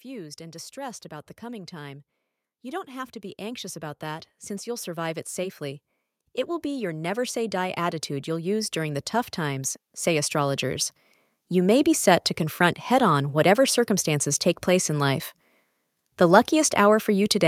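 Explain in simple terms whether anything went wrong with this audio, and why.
Automatic gain rising: from 2.61 to 5.89 s and 6.61 to 10.92 s, voice and background swell together gradually, unlike a speaker moving closer, which would mainly make the voice louder.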